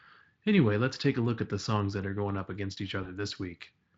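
At 3.03 s, just after "going up against each", the speech briefly smears into a stretched sound that fades out and then stays thin and distorted until about 3.20 s. This is VoIP packet loss concealed by the speech codec. A single lost frame, about 20 ms of audio, was filled by the Speex decoder repeating its last pitch and filter at falling gain. Because each later frame built on that guessed state, the weakness lasted well beyond the gap itself.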